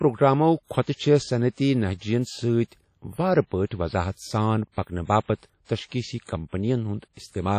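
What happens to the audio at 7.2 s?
The speech sounds washy and ringing, with a hiss that swells and fades with the signal and nothing above 18.5 kHz, as it does across the whole clip. The likely cause is heavy WMA compression, its long transform blocks smearing quantisation noise over tens of milliseconds, which fits a bitrate around 32 kbps.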